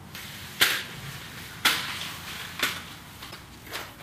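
At 3.28 s the audio breaks up for about 90 ms, until 3.37 s. This is damaged data in a compressed stream. A stretch of the encoded bytes arrived wrong, lost, zeroed or overwritten. The decoder could not read those frames properly. It lost its place and hunted for the next valid frame header. Sound resumed once it locked on again. The gap is heard as a short chirp, squawk, click or hole.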